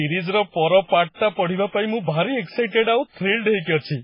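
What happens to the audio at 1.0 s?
At 1.0 s the speech carries the same MP3 compression damage heard across the whole clip, and it's heavy. There's nothing above about 5.3 kHz, and weak frequency lines flicker on and off between frames, giving a watery, swirly texture with smeared attacks. That points to a very starved bitrate, likely around 16 kbps.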